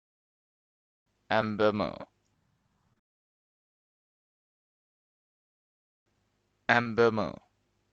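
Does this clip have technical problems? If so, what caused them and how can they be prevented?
Yes. Short concealed packet loss occurs at 1.41 s, 2.93 to 2.97 s and 6.82 to 6.86 s, where about 10, 30 and 30 ms of audio arrived too late to decode. Each gap was patched by extending the preceding sound and cross-fading back, leaving a brief smear or wobble. A spectrogram shows short, blurred bands of repeated texture; the waveform shows an unnaturally regular segment. A larger jitter buffer with forward error correction would prevent it.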